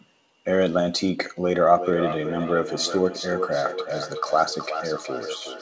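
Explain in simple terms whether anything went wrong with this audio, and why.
From about 1.74 s to the end of the clip, the speech picks up a feedback echo between two devices. Two devices in the same room were on one call: one played the other's sound aloud, and that sound went back into the first microphone. Each echo canceller only removes its own device's playback, so this loop went unchecked. Each word returns roughly every 0.4 seconds, thinner and more ringing, and even the loudest repeats stay clearly quieter than the speech itself.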